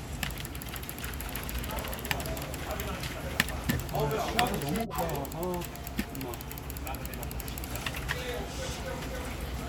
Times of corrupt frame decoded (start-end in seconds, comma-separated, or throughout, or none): 3.00-3.14, 8.16-8.21